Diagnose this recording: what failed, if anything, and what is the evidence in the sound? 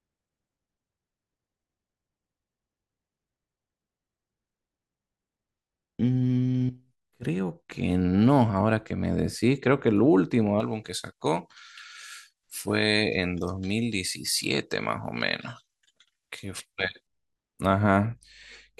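From 10.60 s to 17.07 s the speech turns thin, bright and sibilant, with treble about 11 dB hot at 10 kHz relative to 1 kHz. This is pre-emphasis left on at the transmission stage: a J.17-style treble boost was applied without its matching de-emphasis cut.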